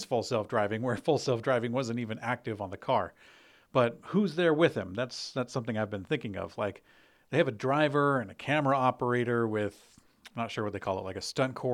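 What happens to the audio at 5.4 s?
Nothing goes wrong at 5.4 s; the speech is intact there.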